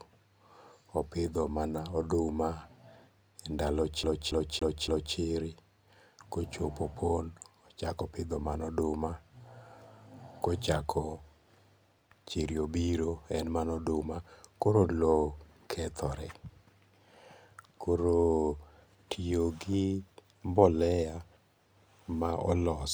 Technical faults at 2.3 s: none

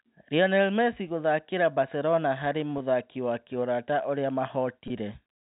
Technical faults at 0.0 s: none

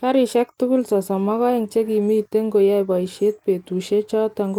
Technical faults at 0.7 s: none

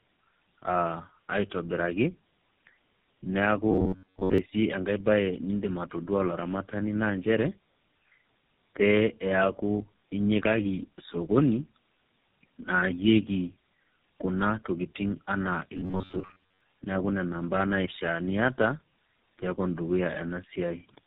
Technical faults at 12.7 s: tandem speech coding

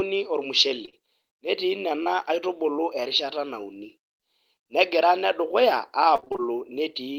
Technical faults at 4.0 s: none

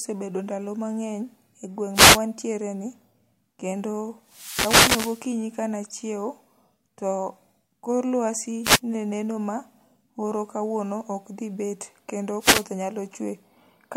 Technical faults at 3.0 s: none

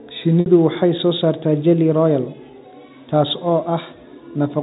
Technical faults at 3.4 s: none

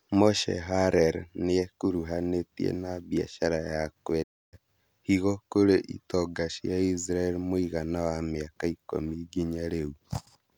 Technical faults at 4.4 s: digital broadcast dropout

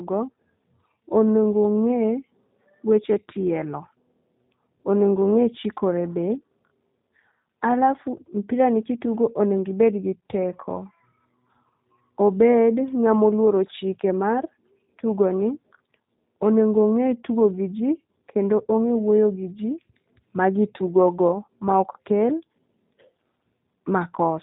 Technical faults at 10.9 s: G.729 codec

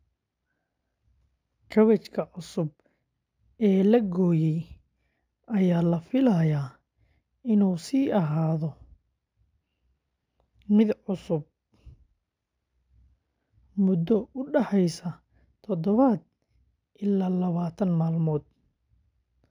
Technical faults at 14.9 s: imaging from linear upsampling

